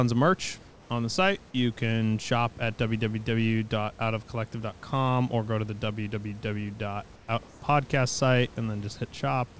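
Comfort noise in place of the background appears at 0.70–0.90 s, 7.16–7.28 s and 7.48–7.62 s. Unlike a dropout, the pause never goes silent: the room noise turns smooth and featureless, about 2–3 dB quieter, likely discontinuous transmission filling gaps.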